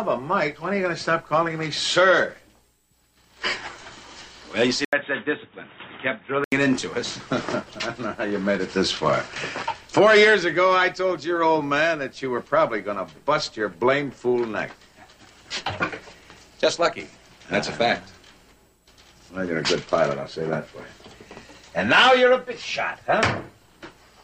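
At 4.85 s an 80 ms gap opens, then the sound turns boxy with faint new background noise, with nothing above 3.8 kHz until 6.52 s: likely an input switched to a poorer device.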